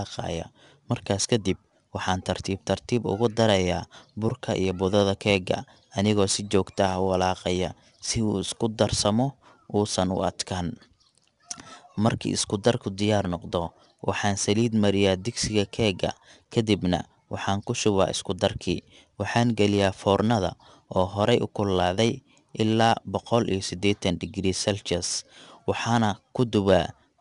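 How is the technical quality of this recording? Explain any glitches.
The recording is noticeably degraded from start to finish. The cause is 4-bit ADPCM compression: coarse prediction steps leave gritty hiss on louder speech, and there's nothing above 10.6 kHz, consistent with roughly 89 kbps.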